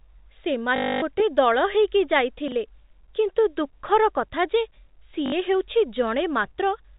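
From 0.76 to 1.02 s, packet loss with last packet repeated replaces about 260 ms of speech with one short packet looped, which fits 20 ms packets, giving a robotic buzz near 50 Hz. Between 2.48 and 2.52 s, chunks out of order push a 10 ms chunk three chunks late, producing a brief jumbled moment with hard joins. From 5.26 to 5.32 s, the same repeated-packet concealment covers about 60 ms, heard as a shorter stutter. Throughout, the G.711 telephone coding keeps everything below 4 kHz.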